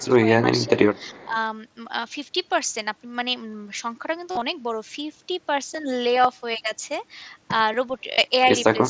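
From 0.0 to 0.27 s, and again from 0.56 to 1.36 s, speech is suppressed in double talk. The level drops by roughly 15 dB and then about 10 dB, likely because the echo canceller turned down the near talker while the far side spoke. The waveform envelope sags, and the spectrogram thins out in the upper bands.

Within that stretch, at 0.6 to 0.67 s and 0.95 to 1.27 s, there is echo leak: a faint copy of earlier sound trails 393 ms behind, about 30 dB below the speech. It is likely loudspeaker pickup that the canceller missed. On the spectrogram it shows as a weak, delayed ghost of earlier harmonic traces.

At 4.31 to 4.42 s, concealed Bluetooth headset packet loss removes 75 ms of audio spread over 105 ms, with a longest run of 45 ms. It recurs at 8.13 to 8.18 s, covering 52.5 ms. Each gap is filled by a repeated cycle of about 20 ms, which sounds like a buzzy tone held at full level with a slight warble where the real audio returns. 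The waveform shows a flat, periodic envelope, and the spectrogram shows evenly repeating stripes.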